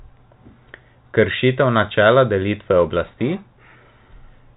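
Speech carried over a G.711 A-law telephone path, band-limited at 4 kHz as that format dictates, with no technical faults present.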